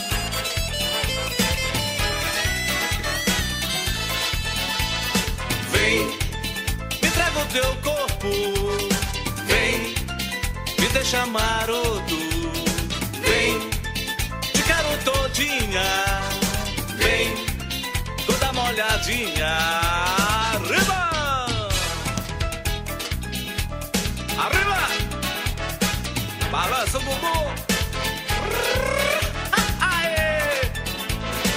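From 14.18 to 18.71 s the sound coarsens, then clears: a call bitrate drop starving the encoder of bits, which fits a fall from 64 to 28 kbps.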